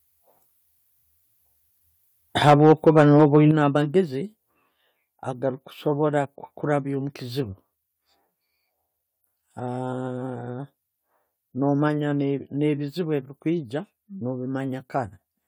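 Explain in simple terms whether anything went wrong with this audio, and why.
Microphone overload, from 2.41 to 3.38 s: the loudest parts of the speech sound harsh and crackly. This is likely because the mic input was set too high, so the peaks got chopped flat.

Microphone volume stepped down, at 2.5, 3.51, 4.53 and 11.88 s: speech and background suddenly get quieter each time, most noticeably at 3.51 s. This is likely the call software turning the mic level down after hearing it too loud.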